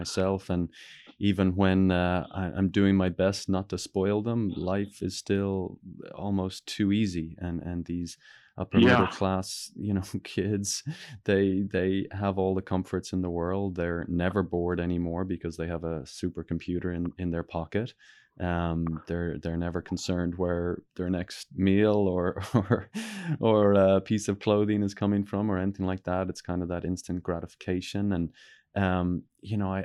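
No technical faults occur in the speech, so there is nothing to describe in time order.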